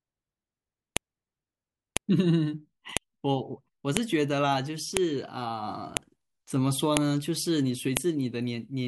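A file header played as audio is heard as a sharp, loud click at 0.97, 1.97, 2.97, 3.97, 4.97, 5.97, 6.97 and 7.97 s, exactly one second apart. The speech appears to have been joined from one-second WAV pieces without removing each piece's header. Those few dozen header bytes are played back as sample values. Each boundary therefore produces a brief snap that cuts through the speech regardless of what is being said.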